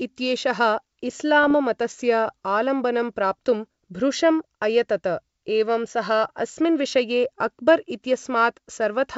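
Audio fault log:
1.43–1.53 s (just before "मतस्य आलम्बनं प्राप्तुं भृशम्") and 7.47 s: bit errors on an ADPCM link, where flipped bits derail the decoder's step size and predictor, leaving rough pops with brief level jumps.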